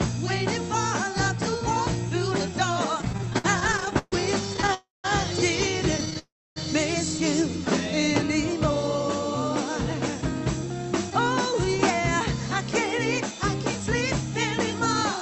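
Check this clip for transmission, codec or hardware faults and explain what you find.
Yes, there are transmission faults: two bursts of stuttering, two freezes and a brief speed-up, all in audio that passed through an Opus call path, with a band limit near 8 kHz.

Repeated stalls (stutter), 3.01–4.72 s and 5.98–6.17 s. Packets arrived late, so the jitter buffer kept running dry: 25 gaps in the first span (longest 134 ms, about a quarter of it concealed), and 5 short gaps of at most 13 ms in the second. The receiver stretched the last sound, so the audio drags and catches without losing anything.

Call audio freeze, 4.74–5.06 s and 6.19–6.58 s. The sound halts, hangs as a fading continuation, then goes quiet for 180 ms and 290 ms respectively before resuming where it stopped, adding 296 ms and 372 ms of delay. The likely cause is held-up packets emptying the jitter buffer.

Jitter buffer speed-up, 11.10–12.17 s. 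The buffer held excess audio, so the receiver trimmed tiny pitch-period slices, about 40 ms in total, to catch up. Playback runs at about 103% speed, at unchanged pitch.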